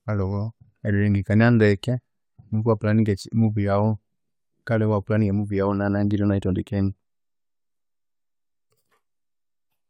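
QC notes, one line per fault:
No faults heard anywhere in this speech recording.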